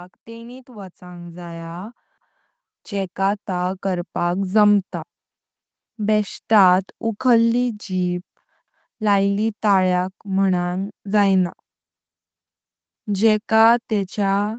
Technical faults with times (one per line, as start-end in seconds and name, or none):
0.25-4.46 automatic gain rising
2.18-2.43 overlapping chunks
5.43-5.68 overlapping chunks
8.68-8.93 overlapping chunks